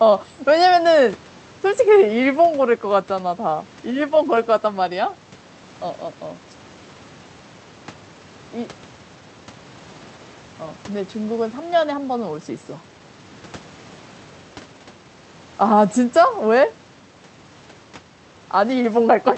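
Nothing goes wrong in this speech recording, which comes across as an ordinary call and carries the usual coding character of the call codec, with the top end stopping around 8 kHz, which fits the wideband setting the call was running on.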